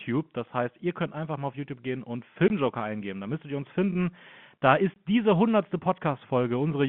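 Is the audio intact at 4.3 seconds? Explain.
Yes, the audio is intact at 4.3 seconds, with the speech coming through the telephone band cleanly and no fault at that moment.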